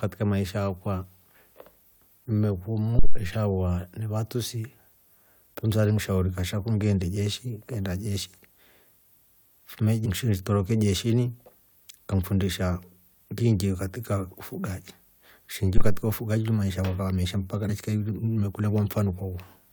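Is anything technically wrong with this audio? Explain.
Yes, there are two kinds of fault. Phantom power thump, at 2.99 to 3.21 s and 15.77 to 16.04 s: a supply switching on or off on the live input pushes a voltage step through the coupling capacitors, giving a deep thump that dies away within about 50 to 60 ms. Damaged data in a compressed stream, at 10.04 to 10.07 s and 17.68 s, just after "yakwa yakava meesha mpaka": corrupted frames throw the decoder out of sync while it hunts for the next header, producing a brief blip in the speech.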